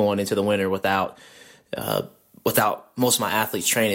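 From 1.81 s to the end, pre-emphasis left on: the treble lift, consistent with a 50 µs FM curve, lacks its matching cut, about 11 dB at 10 kHz, so the speech turns thin and sibilant with a steadily rising shelf rather than a narrow peak.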